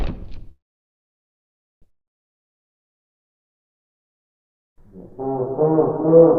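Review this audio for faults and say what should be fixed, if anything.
A call audio freeze runs from 0.51 to 1.84 s. The sound stops and is filled for about 1.3 s, almost all of it silence. The likely cause is held-up packets draining the jitter buffer. Playback then resumes where it stopped, with nothing lost but about 1.3 s of added delay. To prevent it, use a steadier network path or a deeper adaptive jitter buffer.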